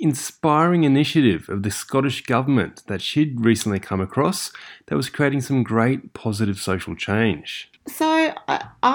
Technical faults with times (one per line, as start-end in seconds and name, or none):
none